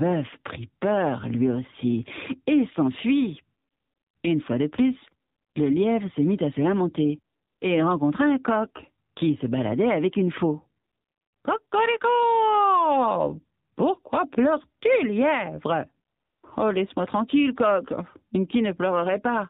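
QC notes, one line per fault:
throughout, AMR narrowband mobile codec: the speech is squeezed into telephone width, with nothing left above 4 kHz, because the codec samples at 8 kHz and rebuilds the voice from a vocal-tract model driven by only a few pulses per 5 ms subframe. The damage is plainly audible as a buzzy, synthetic edge on the voice, which fits one of the lower AMR-NB modes, around 7.4 kbps.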